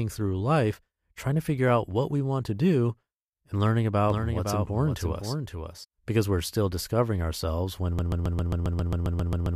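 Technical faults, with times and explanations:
4.10–5.84 s, doubled audio track: after "to do and learning", a second full-band copy of the sound runs roughly half a second behind, about 5 dB quieter. It likely comes from a slower second capture path or a misaligned edit. Unlike an echo, it has no decay or room colour and cuts in and out abruptly.
7.99 s to the end, broken-record loop: after "still discovering ourselves when", a 134 ms fragment repeats exactly, back to back, about 7.5 times per second until the clip ends. The audio that should follow is lost, likely because the stream stalled. Unlike doubling, nothing moves forward.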